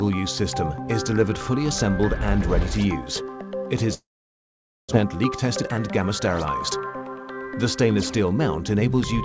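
From 3.94 s to 4.95 s the sound breaks off. The last sound trails on as a fading buzz or hiss, then goes almost silent. A long network dropout is the likely cause. About 0.6 s of audio never plays. The sound then resumes further on, with the gap skipped and roughly 0.4 s of extra delay built up.

From 5.04 s to 7.31 s a jitter buffer speed-up follows. The receiver repeatedly cuts tiny pieces, one or a few pitch periods long, to shrink the backlog. Playback runs at 115 percent with unchanged pitch. It sounds hurried. About 0.3 s is removed in total.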